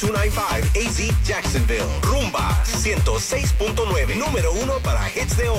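Mains buzz runs throughout the clip. Sharp switching spikes from a dimmer, rectifier or unshielded path arrive twice per 60 Hz cycle, stacking harmonics into the kilohertz range. The result is a steady, raspy buzz sitting about 25 dB below the sound.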